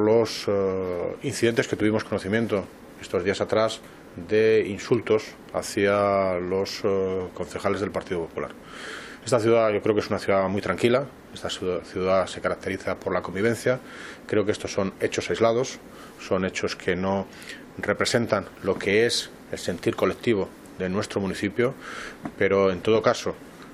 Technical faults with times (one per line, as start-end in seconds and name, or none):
none